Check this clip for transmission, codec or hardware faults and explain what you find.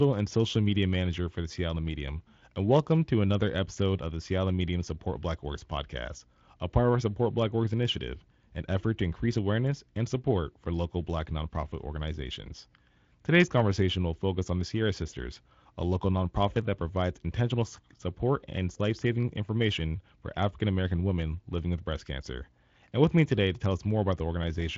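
Nothing stood out on listening to this speech recording.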